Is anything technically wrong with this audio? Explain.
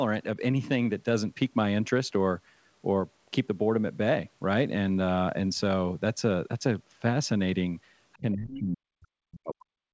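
Yes, there are two faults near the end of this speech. From 8.18 s to the end at 9.93 s, there is speech suppressed in double talk. The talker's voice sinks by as much as 40 dB. This is likely an echo canceller ducking everything while both sides spoke. From 8.5 to 8.59 s, there is the other side's voice leaking through. A brief scrap of a second voice sits around 10 dB below the talker. The likely cause is loudspeaker echo the canceller failed to remove. The missing content above 8 kHz fits the G.722 call path and is not itself a fault.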